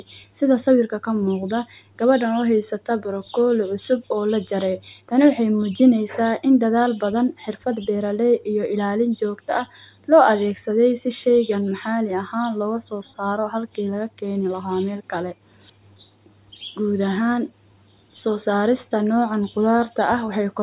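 No technical faults are audible.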